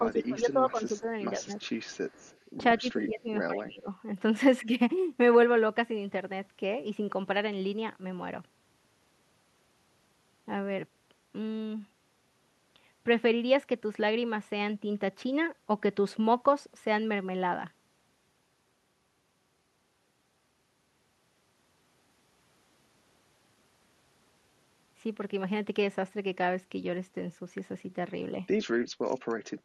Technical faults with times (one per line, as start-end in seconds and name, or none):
0.00-1.08 speech suppressed in double talk
1.38-1.54 speech suppressed in double talk
1.60-2.40 echo leak
2.80-3.89 speech suppressed in double talk
4.64-4.69 speech suppressed in double talk